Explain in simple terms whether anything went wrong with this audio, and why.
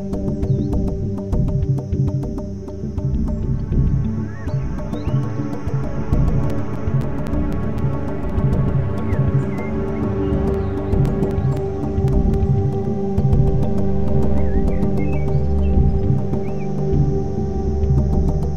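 Something did go wrong here: CD scratch ticks. From 6.24 to 8.30 s, and again from 10.28 to 12.85 s, the sound is broken by small regular clicks, about four each second. A scratch on the disc passes the laser once per turn. Each time, the player loses more data than it can repair, so it patches or silences a tiny gap. The longest gap lasts only about a hundredth of a second.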